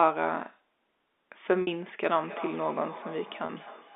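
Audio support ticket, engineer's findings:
Packet loss with pitch repetition at 1.62–1.67 s and 3.46–3.49 s. Brief buzzy held tone, 50 ms then 30 ms. Concealment looping the last pitch period.

Feedback echo between two devices, 2.2 s to end. Repeats roughly every 0.3 s, about 15 dB below speech. Nearby second device replaying the call into this microphone; the local canceller cannot remove it.

G.711 telephone band, 250 Hz to 3.6 kHz, heard as expected.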